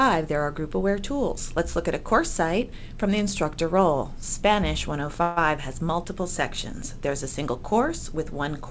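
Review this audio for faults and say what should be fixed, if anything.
There's a call audio freeze from 5.22 to 5.38 s: the sound stalls and the last bit gets stretched into a short fading buzz for about 150 ms, then picks up right where it left off, so nothing's lost but everything after it runs that much later. The likely cause is late packets draining the jitter buffer. The 8 kHz top end fits a G.722 call path. To prevent it, give the jitter buffer more headroom or fix the network delay spikes.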